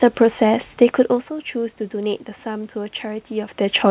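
Listening to the speech, nothing stood out as a technical problem.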